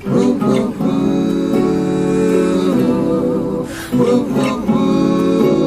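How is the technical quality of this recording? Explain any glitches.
No technical glitches can be heard in this recording. There is nothing in it that calls for an explanation.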